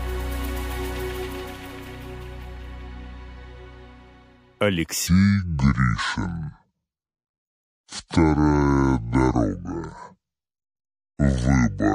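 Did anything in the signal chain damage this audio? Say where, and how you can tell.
Yes. From 5.07 s to the end of the clip, there is a section at the wrong speed. The sound suddenly drops to about 0.63 times its original speed. Pitch falls with it, by roughly seven semitones. Everything turns deep and slow at once, with no gradual glide. Speed and pitch moving together point to a clock mismatch. The likely cause is an editing or playback stage resampling that part against the wrong rate.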